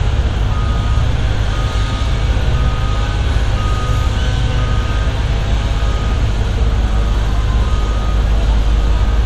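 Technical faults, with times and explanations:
No technical faults can be heard anywhere in this recording.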